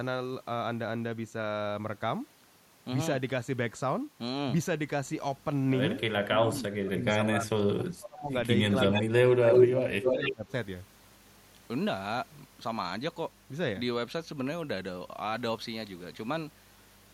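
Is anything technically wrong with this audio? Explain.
Yes, two related echo-control faults occur in this speech.

Speech suppressed in double talk, from 6.26 to 8.34 s and 8.9 to 10.52 s: the voice repeatedly sinks, at worst by about 30 dB. The likely cause is an echo canceller mistaking overlapping talk for echo. A waveform would show gouged, shrunken envelope stretches, and a spectrogram would show faded bands.

Echo leak, at 8.76 to 9.03 s, 9.52 to 9.58 s and 10.05 to 10.33 s: a copy of the voice returns 308 ms late, first well below the speech, then briefly louder than it, then at similar level. The likely cause is loudspeaker pickup slipping past cancellation. On a spectrogram these bursts appear as short, time-shifted duplicate harmonic patterns.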